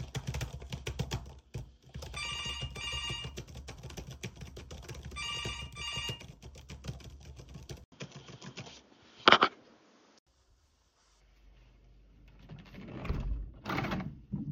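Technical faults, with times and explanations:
7.84–10.27 s, input switched to a poorer device: after an 80 ms gap, the sound turns dull with nothing above 7 kHz, shifts in level, and gains new background noise, likely from a different input device.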